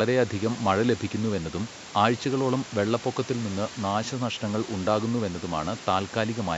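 There are no technical faults to describe in time order; the call microphone processing and the faint room noise behind the speech are both normal.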